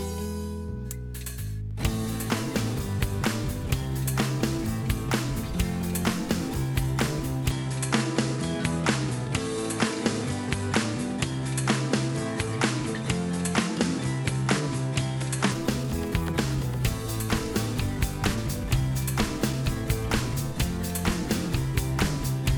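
From 7.51 to 15.52 s, the sound narrows: nothing above 11.4 kHz, with a faint new background noise far below the signal and almost no change in level. This is likely an input switched to a poorer device, with no gap at either switch.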